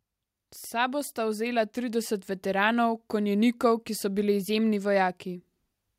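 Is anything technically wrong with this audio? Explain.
Yes. From 1.14 s to 2.74 s there is automatic gain rising. The automatic gain control judges the input too quiet and lifts its gain step by step. Over that 1.6 seconds the level climbs by about 5 dB. Because the gain acts on everything it receives, the speech and the background noise swell together. The result is a slow, even bloom in loudness rather than a sudden jump.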